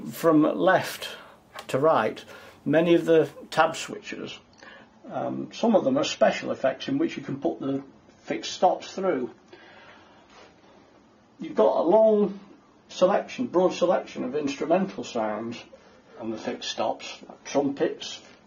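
At 3.91 s the sound switches abruptly, without a gap, to an adaptive stream at a lower bitrate. Nothing remains above 6.9 kHz, and codec artefacts rise, which fits a drop to 24 kbit/s AAC.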